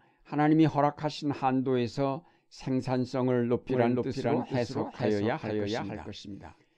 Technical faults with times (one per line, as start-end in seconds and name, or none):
3.69-6.77 doubled audio track